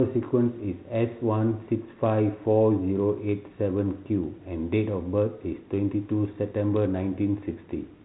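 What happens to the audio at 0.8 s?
Nothing goes wrong at 0.8 s: the speech carries on intact through that moment, with only the band-limited telephone character of its 32 kbit/s G.726 ADPCM coding.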